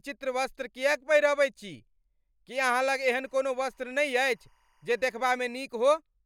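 From 2.57 to 5.64 s, timecode bleed sits faintly under the speech: 24-frame code leaking in, warbling between roughly 1 and 2 kHz, about 45 dB down.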